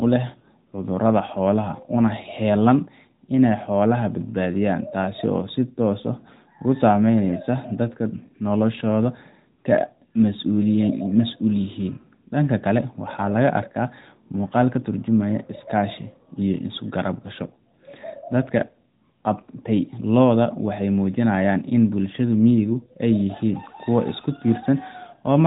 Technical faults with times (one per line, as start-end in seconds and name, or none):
none